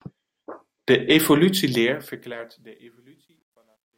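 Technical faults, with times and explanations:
1.6–3.98 s, truncation distortion on a fade: the speech fade-out, starting around 1.6 s, turns gritty, worst from 2.65 s. Undithered quantisation, consistent with 11 bits, squares off the waveform. A clean fade thins smoothly instead.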